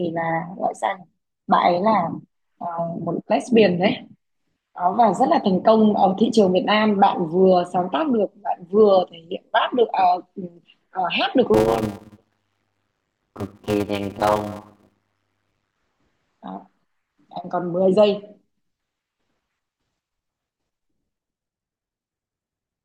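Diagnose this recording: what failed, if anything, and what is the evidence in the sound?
From 11.54 s to 15.76 s the speech carries a steady 100 Hz buzz and slows to about 0.53 times normal speed, with timbre unchanged. This is a block size mismatch (padded) in the driver or buffer stage. Each block is topped up with zeros, which fits roughly 256 written samples per longer read.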